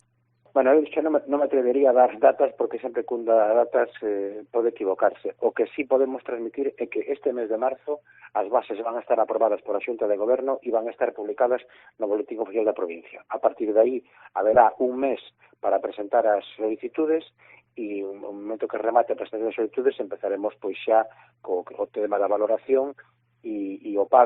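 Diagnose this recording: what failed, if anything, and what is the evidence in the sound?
The codec stage failed, as a corrupt frame decoded: a brief glitch from 14.53 to 14.56 s, peaking around -15 dBFS. Damaged bits in a single frame were decoded anyway, putting energy at wrong frequencies. Unlike a dropout or concealed lost packet, the frame was played with wrong content rather than lost or repeated.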